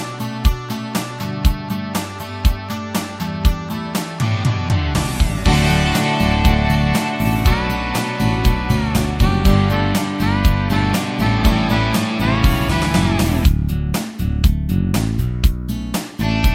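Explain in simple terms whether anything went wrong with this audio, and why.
Nothing went wrong here; no problems can be heard anywhere.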